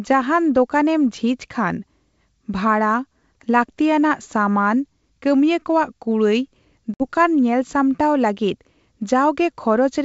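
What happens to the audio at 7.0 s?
Packet loss on the ADPCM call hits here: about 60 ms of audio, roughly three packets, goes missing between 6.94 and 7.05 s and is filled with silence. Because G.722 codes each band by ADPCM at 64 kbit/s, the receiver's adaptive predictor and step size drift away from the sender's during the gap. The result is a sharp-edged dropout in the speech, followed by a brief stretch of mistracked, slightly distorted sound that settles within some tens of milliseconds.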